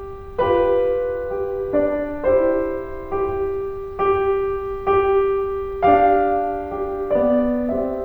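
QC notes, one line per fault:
No faults heard in this music.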